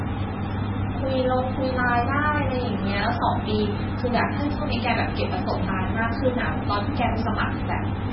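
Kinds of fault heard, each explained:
MP3 compression: the speech has nothing above 5.6 kHz and sounds heavily watery and swirly, likely from MP3 encoding at a very low bitrate, around 16 kbps. A spectrogram shows a hard, flat ceiling at 5.6 kHz with patchy, flickering blocks below it.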